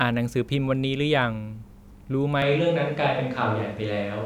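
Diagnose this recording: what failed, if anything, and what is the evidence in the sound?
At the capture stage, the close microphone likely dropped out at 2.42 s, forcing a switch to a distant microphone that lasts to the end. The speech abruptly turns roomy, hollow and bass-light with its level barely changing, and background noise sits roughly 30 dB below it.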